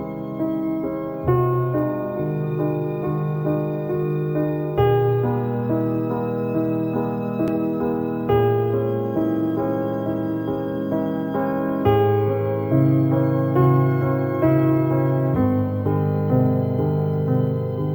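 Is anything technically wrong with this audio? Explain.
Yes. Throughout the clip there is crude rate conversion. Samples were repeated rather than filtered, which fits a 32 kHz to 48 kHz step, adding inharmonic shifted copies roughly 35 dB below the signal, heard as a gritty buzz following loud and high sounds.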